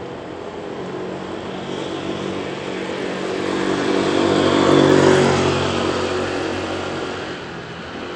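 From start to end, the everyday sounds carry gritty, coarse noise. The treble flickers and drops away, with aliasing on top. This is likely Bluetooth SBC compression starved of bits, consistent with about 96 kbps. The upper bands lose out first.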